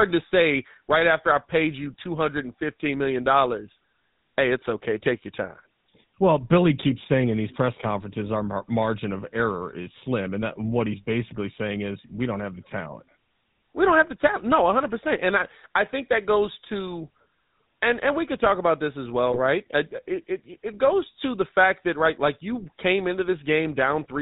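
Throughout, the speech carries the GSM full-rate codec's plainly audible buzzy, gravelly roughness, consistent with 13 kbps coding. The codec rebuilds the voice from a vocal-tract model driven by sparse pulses, and a spectrogram shows everything above 4 kHz gone, with coarse harmonic texture below.

From 19.32 to 19.39 s, GSM bit errors corrupt the decoder's filter, pitch or gain values, consistent with roughly three damaged frames. The voice briefly breaks into a squawk, pop or gargle; the waveform shows a short, distorted burst, and the spectrogram shows bent, smeared energy there.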